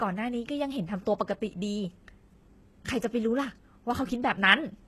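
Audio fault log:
Throughout, HE-AAC compression, plainly audible: the speech has no content above about 12.3 kHz, and the treble below that cutoff still sounds bright but synthetic, with sibilants coming out gritty and lispy. That pattern points to spectral band replication, where the upper bands are copied up from lower ones and shaped by a coarse envelope, so their harmonics fail to line up. This is likely a very low bitrate, around 16 kbps. A plain low-pass filter would leave the top dull, not falsely bright.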